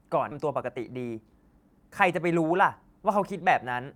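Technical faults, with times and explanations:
0.31–0.33 s, skip ahead: Playback jumps forward with no filler between the two sides, so about 0.7 s of speech is missing and the audio on either side is butted together almost directly. The result is an abrupt discontinuity where syllables or words simply vanish. This fits a jitter buffer that overflowed and discarded a stretch of queued audio, with later audio already waiting, cutting the playout delay by roughly the same 0.7 s in one step.
0.41–1.81 s, jitter buffer speed-up: Over this 1.4 s stretch the speech runs at about 112% of normal rate while the pitch stays unchanged, giving a hurried, compressed delivery. The receiver is trimming short pieces, one or a few pitch periods at a time, repeatedly throughout the stretch, removing about 0.2 s in total. This points to a buffer still holding more audio than its target after the burst and draining the excess gradually rather than in another jump.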